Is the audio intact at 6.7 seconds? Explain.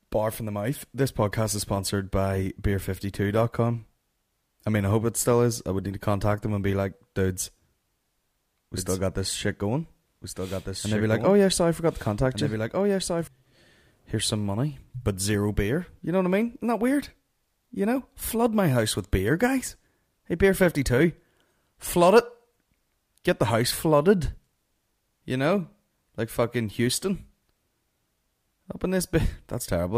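Yes, the audio at 6.7 seconds is intact, with no fault to be heard at that point.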